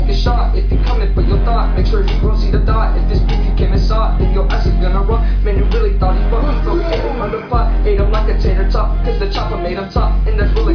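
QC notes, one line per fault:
No audible faults found.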